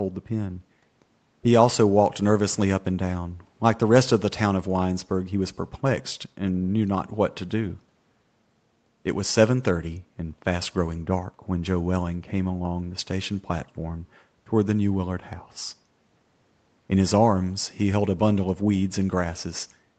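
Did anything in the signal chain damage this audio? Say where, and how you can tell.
No, nothing in the signal chain damaged this audio.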